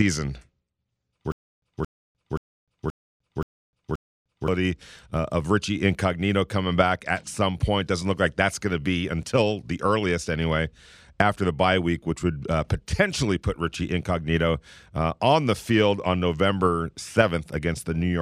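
From 1.32 to 4.48 s, a stutter with silent gaps: the same 224 ms burst repeats six times, each followed by 303 ms of flat digital silence, likely from a stalled stream retrying its last buffer. It shows as identical blocks separated by blank columns every 527 ms.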